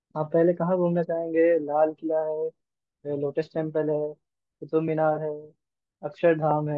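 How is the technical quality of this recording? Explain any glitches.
No audible glitches or faults.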